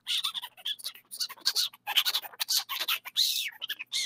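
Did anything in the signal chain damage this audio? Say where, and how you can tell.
Yes. In the call-processing stage, a noise suppressor made for speech was applied to music or sounds. It pumps the level throughout, with swings of about 15 dB. Onsets come through while sustained material sinks. That pattern separates it from codec damage, which changes tone rather than level.

The sound cut by the noise suppressor is heard as four dips: 0.45–0.65 s (about 15 dB), 0.92–1.13 s (about 17 dB), 1.7–1.87 s (about 17 dB) and 2.24–2.43 s (about 14 dB). Each lasts roughly 150–200 ms. The suppressor clamped on material it judged steady. A dropout would go silent, but these only sink.

A Bluetooth SBC bit pool drop hits the wireless codec link from 3.62 s to the end. The treble dulls and gritty quantisation noise rises, which fits the bit pool falling from 28 to about 11, near 90 kbps. The top sub-bands lose their bits. 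Unlike the suppressor's level swings, this damage shows up as degraded texture.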